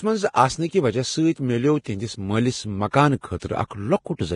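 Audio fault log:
Throughout: Vorbis compression. Hissy, grainy speech with roughened tones and nothing above 10.5 kHz. This is likely heavy low-rate Vorbis coding, around 32 kbps, which turns fine treble detail into noise.
2.91–2.93 s: pre-echo. A brief 25 ms hiss leads into a sharp attack, which sounds smeared because block-wide quantisation noise spills into the quiet before it.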